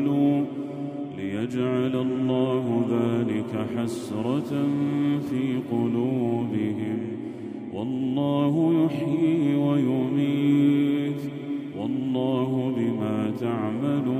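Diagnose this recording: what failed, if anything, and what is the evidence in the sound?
Nothing failed here: listening through, there's no click, dropout, distortion or glitch to point to at any stage, so there's nothing to diagnose.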